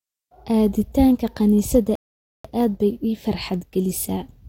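At 1.95 s the speech cuts to silence in a rebuffering stall. The player ran out of downloaded audio and waited for more. At 2.45 s it resumes exactly where it stopped. Nothing is lost, but about 0.49 s is added.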